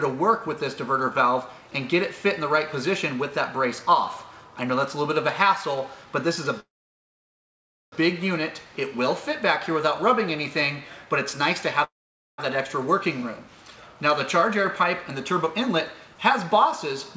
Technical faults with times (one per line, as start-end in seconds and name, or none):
6.60-7.94 call audio freeze
11.84-12.40 call audio freeze
15.32-17.17 jitter buffer speed-up